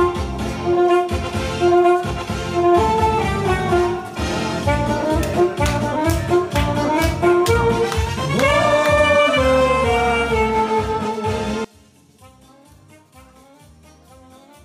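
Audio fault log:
11.65–14.65 s, one channel inverted: right at the tail the sound collapses, dropping by about 28 dB, as if the middle of the mix has been scooped out. That's likely one side flipped in polarity, so when the two channels get summed to mono, everything they share cancels out and you're left with only the small difference between them, a faint ghost that hangs on to the end.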